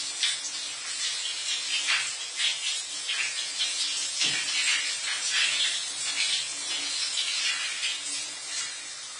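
AAC compression, throughout: nothing above 10 kHz, and the sound is dull, smeared and warbly. The likely cause is AAC-LC at about 24 kbps.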